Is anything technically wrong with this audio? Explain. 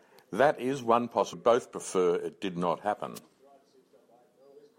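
Yes, there are two separate problems in this speech clip.

At 1.32 s the audio jumps ahead with a tiny blip, as if a chunk of the recording just isn't there. That's most likely a stream segment skipped: one piece of a segmented stream didn't load, so the player dropped it and carried straight on with the next one. Whatever should have filled that gap is lost, and the edit lands abruptly rather than with any fade.

From 3.15 to 3.19 s there's a brief swish of static, about 50 ms, sitting over the voice. That's a wireless microphone noise hit. The analogue FM radio link between the mic and its receiver faded for a moment, with reflected signals cancelling the direct one. As the signal weakened, the receiver's own noise came up before the link recovered.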